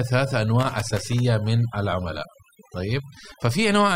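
Overdone noise removal runs throughout: an over-aggressive reducer pulls bands near its noise estimate right down, leaving a lowered background with twinkling specks. From 0.61 to 1.19 s, loose connector crackle appears, an irregular burst of scratching as a worn contact makes and breaks.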